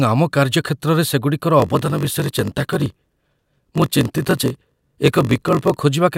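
From 1.58 s to 5.75 s, right after "କାର୍ଯ୍ୟକ୍ଷେତ୍ରରେ ସେଗୁଡ଼ିକର", there is a block size mismatch (padded): one stage hands over blocks shorter than the next stage reads, which fits a 1024-sample read, and the shortfall in each block is filled with silence. These regular gaps produce a buzz at about 46.9 Hz, and the speech plays at 0.938 times its normal speed while keeping its timbre.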